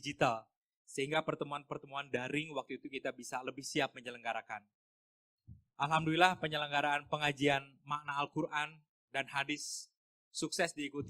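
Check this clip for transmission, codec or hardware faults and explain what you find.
Nothing stood out on listening to this clip.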